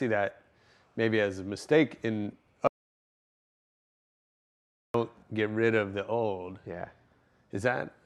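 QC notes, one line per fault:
2.67–4.94 s, audio dropout to silence: the speech stops abruptly mid-flow and about 2.27 s is lost, likely because the input disconnected or muted while recording continued writing zeros. The waveform flatlines completely and the spectrogram goes blank, with no room tone.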